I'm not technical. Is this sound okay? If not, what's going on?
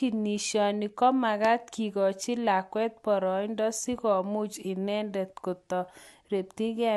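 No. There is one loud pop, from about 1.45 to 1.47 seconds into the speech. It is a single sharp click or thump, much louder than the talking around it, and very brief. The speech keeps going underneath it without a break. The likely cause is a sudden jolt of electricity getting into the recording, for example from a cable being bumped, a switch being flicked, or a spark of static.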